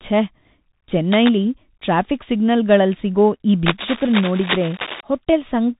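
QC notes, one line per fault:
throughout: Bluetooth CVSD headset codec. Nothing passes above 3.8 kHz, s sounds turn scratchy with granular hiss underneath, fitting a 64 kbps one-bit stream whose step lags loud highs.
1.11–1.34 s and 3.66–5.01 s: cable scratch noise. Dense, uneven rustling bursts, the first a bit under the speech, the second about as loud, likely a worn cable or connector being moved.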